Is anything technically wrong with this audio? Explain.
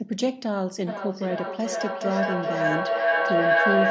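Yes. From 0.86 s to the end of the clip, a feedback howl takes over: a ringing tone around 700 Hz swells, with the loop repeating about every 400 ms, and peaks about 5 dB above the speech itself. Two devices in the same room on one call create a loop, and each pass from loudspeaker back into microphone adds level. The repeats grow instead of decaying and narrow to the loop's favoured pitch. The call's microphone processing shows as a band limit with nothing above 8 kHz, which is not a fault.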